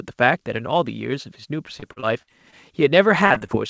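From 1.80 to 2.54 s and again from 3.26 to 3.50 s, the speech shows repeated packet loss (robotic sound). Short holes of up to about 48 ms are filled by extending the preceding sound, giving choppy fragments, denser in the second stretch.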